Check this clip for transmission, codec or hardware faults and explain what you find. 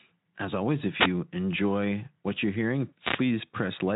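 One transmission fault is audible: a wireless microphone noise hit from 2.99 to 3.25 s, just after "enjoy what you're hearing". The analogue FM radio link from the microphone fades briefly as reflected paths cancel the direct signal. With less carrier reaching the receiver, its own noise rises, producing a short swish of static lasting about a quarter of a second. The speech path itself sounds consistent with light Speex coding, with nothing above about 3.8 kHz.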